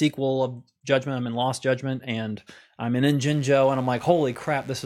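A speech clip with mains buzz from 3.25 s to the end at 4.86 s, starting just after "judgment and i'm in". It is a steady, raspy buzz built on 50 Hz. Sharp switching spikes twice per mains cycle spread harmonics into the kilohertz range. It sits roughly 30 dB below the speech.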